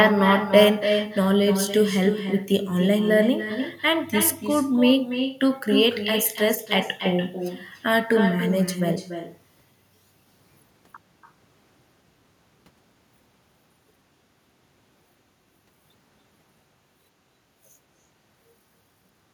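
Every phrase in this speech recording is trailed by a fainter, thinner copy of itself arriving roughly a third of a second later, about 8 dB below the original, and it persists from start to end of the clip. This is echo with no canceller: the far end played the call through a loudspeaker, its microphone recaptured that playback, and nothing subtracted it, so the talker's own voice returned after the network round trip.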